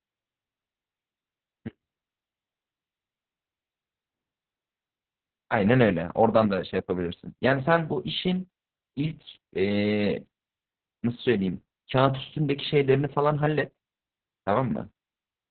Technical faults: Opus voice compression

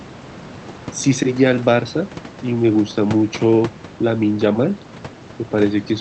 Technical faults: none

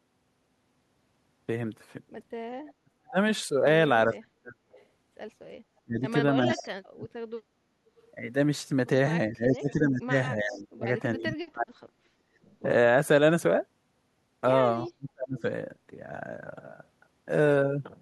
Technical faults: echo leak; speech suppressed in double talk; background gated by the echo canceller

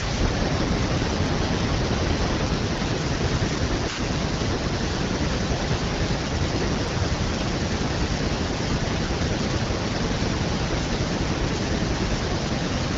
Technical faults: none

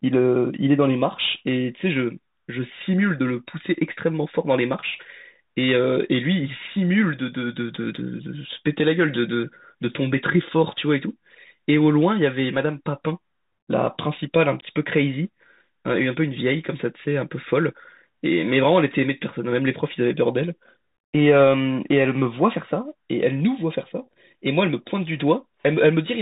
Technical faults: Bluetooth CVSD headset codec

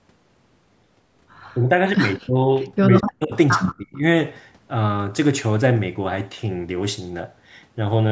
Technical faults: speech suppressed in double talk

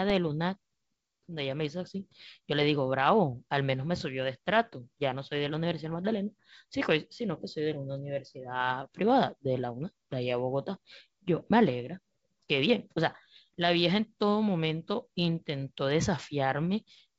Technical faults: none

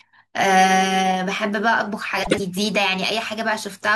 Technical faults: frames out of order

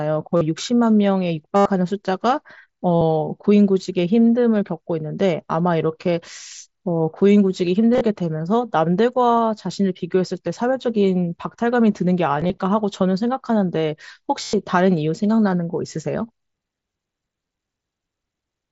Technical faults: concealed Bluetooth headset packet loss

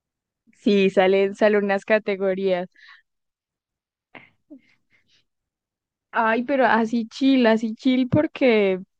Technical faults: none

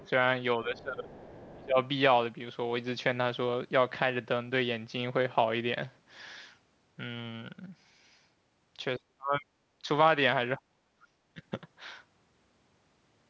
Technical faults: other side's voice leaking through; speech suppressed in double talk

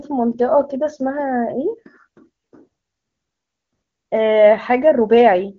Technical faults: none

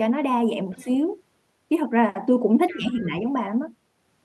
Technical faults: other side's voice leaking through; speech suppressed in double talk

